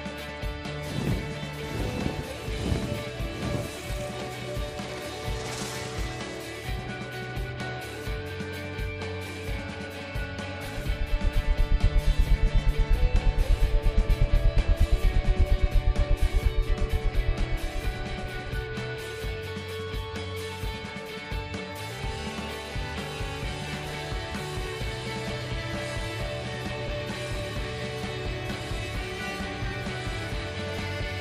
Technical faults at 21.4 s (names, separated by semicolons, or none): none